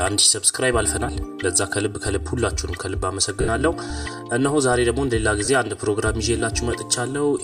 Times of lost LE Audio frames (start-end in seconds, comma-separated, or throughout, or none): 1.08, 3.41-3.48, 5.45-5.48